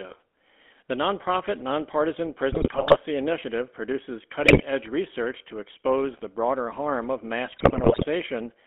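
Throughout, the speech has passed through a GSM full-rate codec. Its coarse pulse-driven vocal-tract model, consistent with a 13 kbps GSM stream, leaves a buzzy, gravelly roughness, and the line band confines the sound to roughly 250 Hz to 3.4 kHz.

At 2.52 to 2.96 s, after "nonprofit nonpartisan", at 4.43 to 4.63 s, after "initiative produces", and at 7.52 to 8.06 s, after "broader harm of mass", GSM bit errors corrupt the decoder's filter, pitch and gain values, and the speech breaks into squawks, pops and gargling.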